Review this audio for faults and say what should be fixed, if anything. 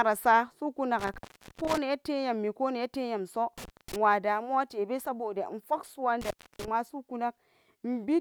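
Intermittent contact cuts the speech out at 0.99 s for about 0.41 s, at 3.58 s just after "koh neleyam so" for about 0.23 s, and at 6.21 s for about 0.29 s. A loose cable or plug opens briefly, and crackle at each break sets it apart from a clean digital dropout. Secure or replace the connector and cable.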